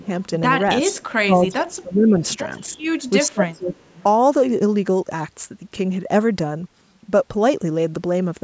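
Right at the start, 0.0 to 0.1 s, the sound dips by about 15 dB, likely speech suppressed in double talk: the echo canceller couldn't tell its own talker from loudspeaker echo, so it ducked everything. From 0.84 to 1.12 s there's a faint echo leak, likely from a speakerphone whose canceller let some pickup through. It's a copy delayed about 0.36 s, sitting about 25 dB down. The same thing happens at 1.55 to 1.76 s (about 20 dB down), 2.35 to 3.09 s (about 35 dB down), and 3.49 to 4.03 s (about 30 dB down). Overlapping those, the suppression returns from 0.93 to 2.17 s (up to about 20 dB), from 2.68 to 2.78 s (about 10 dB), and from 3.24 to 3.73 s (about 25 dB), where the level sags.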